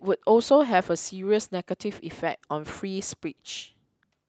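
No technical faults can be heard anywhere in this speech recording. There is nothing here to place on a timeline or trace to a cause.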